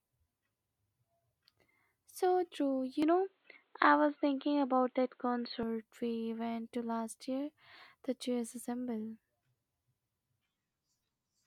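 From 3.02 to 5.63 s, beginning at "we went to last", the speech turns boxy with nothing above 4.4 kHz and shifts in level and background noise, not mere filtering: likely an input switched to a poorer device.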